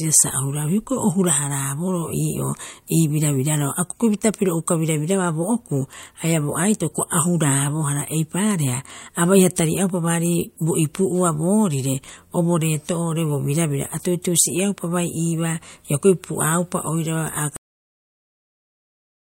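At 17.56 s the speech stops mid-sound and drops straight into digital silence with no decay, staying silent to the end. This is a cut-off end: the final buffers of audio were never written or played, so the recording simply truncates.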